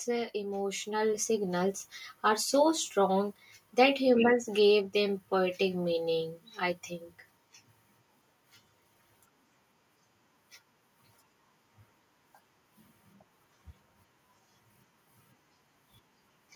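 From 0.31 s to 2.53 s, the level climbs steadily. This is automatic gain rising. The gain control judged the incoming speech too quiet. It then raised its gain step by step, by about 8 dB over those two seconds. Because the whole signal is boosted, the voice and the background noise swell together. The room tone grows along with the speaker. The result is a slow fade-up rather than a sudden jump.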